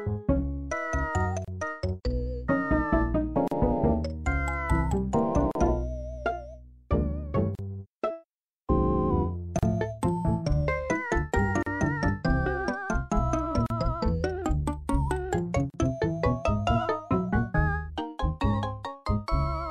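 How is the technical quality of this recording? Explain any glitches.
The recording is repeatedly interrupted by short dropouts. A gap at a join of encoded pieces opens at 1.45, 3.48, 5.51, 7.55, 9.59, 11.63, 13.66 and 15.70 s, roughly every 2 s. The first lasts 31 ms, the rest 38 ms. The audio was encoded in separate chunks and joined untrimmed. Each chunk keeps its encoder start delay and final-frame padding. The sound stops abruptly, with smeared edges, then resumes where it left off.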